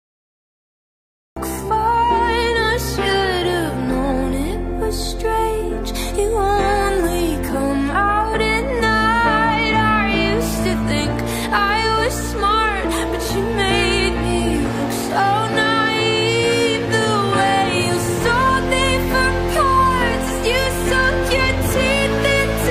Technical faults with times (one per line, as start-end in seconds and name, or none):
0.00-1.36 cut-off start